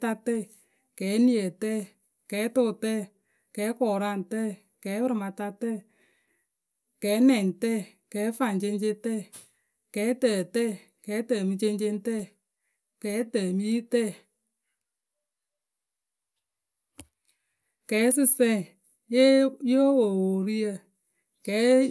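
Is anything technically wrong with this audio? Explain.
No, nothing technically wrong can be heard in this speech recording. No fault stands out anywhere in it.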